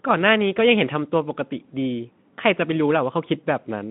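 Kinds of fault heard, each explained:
No faults of any kind heard.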